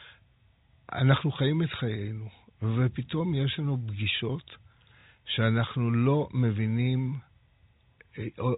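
At 5.01 s the speech breaks for 30 ms, until 5.04 s. This is packet loss with the last packet repeated. A block of audio never arrived, so the receiver replayed the previous block to fill the gap. That fits a single lost packet. The effect is a small blip. The narrow telephone band of the G.711 coding is audible throughout.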